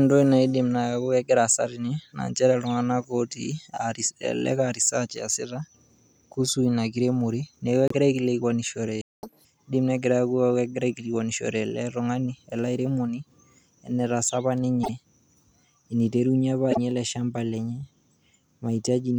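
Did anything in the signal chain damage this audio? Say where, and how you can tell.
Yes. At 7.88 s, 14.83 s and 16.71 s, just before "ale lshamba lenye", the speech jumps ahead and a short chirp, noise burst or short hole of about 70 ms replaces it. These are likely a broken MP3 bit reservoir at the codec or storage stage. Frames were lost, so the following frames borrowed bits from the wrong bytes. Each event spans roughly two or three 26.1 ms frames. On a spectrogram each appears as a brief smeared vertical band, with a small discontinuity in the waveform.

From 9.01 to 9.23 s the sound cuts out mid-flow for about 0.22 s. This is likely a playback stall in the buffer or driver stage, where the player ran dry or its thread was blocked and it wrote nothing until it recovered. The waveform shows a flat line at that point, and the spectrogram shows an empty vertical gap with the speech resuming on the right side of the gap.

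Right after the stall, from 9.23 to 9.45 s, the speech plays at 2.0 times normal speed, with pitch raised by around ten semitones. This is catch-up at higher speed in the playback stage. The player resampled its backlog to recover the lost time. On a spectrogram the harmonics jump sharply upward and spread apart for about 0.2 s. In the waveform, the syllables are visibly compressed in time.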